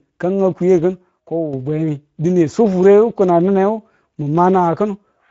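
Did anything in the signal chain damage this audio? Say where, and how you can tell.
Yes. The first problem is at the codec stage: the Speex codec runs through the whole clip. This speech has a coarse, hoarse, noisy texture, because a CELP coder leaves few bits for the excitation signal and rebuilds it only approximately. The damage is plainly audible. Nothing reaches above 7.7 kHz, which fits a wideband Speex mode at a moderate bitrate, somewhere around 17 kbps, rather than a full-band path.

The second problem comes from 1.20 s to 1.53 s, where the level drops abruptly by about 6 dB and then comes back just as suddenly. The timbre stays the same during the drop. Only the loudness falls. A 6 dB step in material common to both sides is what a mono sum gives when one stereo channel goes silent. The likely cause is one channel dropping out for about a third of a second, in the wiring or the interface channel feeding the downmix.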